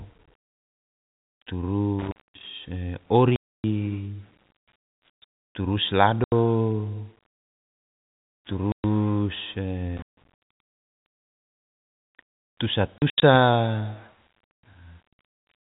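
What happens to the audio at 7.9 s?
Nothing goes wrong at 7.9 s: the speech carries straight through that moment with only the steady narrow band of G.711 telephone coding, which passes nothing above 4 kHz.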